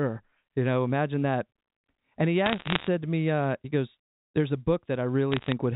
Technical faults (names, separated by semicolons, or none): bit errors on a digital phone line